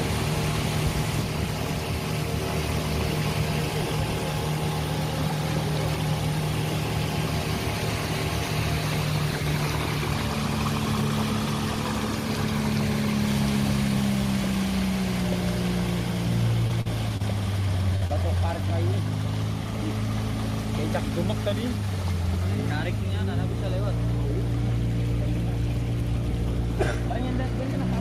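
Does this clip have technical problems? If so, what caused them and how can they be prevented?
Yes. Between 16.67 and 16.71 s, 16.81 and 16.87 s, 17.17 and 17.22 s, and 18.07 and 18.11 s, there is short concealed packet loss. Packets carrying 20 to 40 ms of audio arrived too late or not at all, so the decoder extended the preceding sound and cross-faded back into the real signal. Each gap is heard as a brief smear or wobble, and a short transient inside it can disappear. A larger jitter buffer, forward error correction or a steadier network path would prevent this.

From 17.96 to 18.03 s there is a burst of packet loss. About 60 ms of consecutive audio failed to arrive in time, and the receiver covered roughly 54 ms by continuing the last sound while fading it down. The result is a held buzz or decaying hiss, after which the sound resumes further along with that stretch missing. Redundant packet coding or prioritising the audio stream on the network would prevent it.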